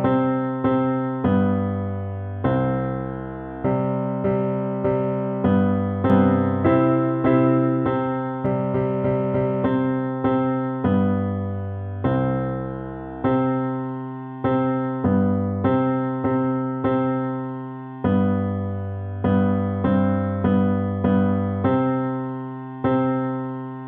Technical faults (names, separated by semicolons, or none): doubled audio track